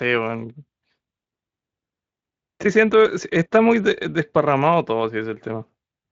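No faults: the speech has gone through a Speex path, and its top end stopping near 7.6 kHz fits a wideband mode at around 24 kbps.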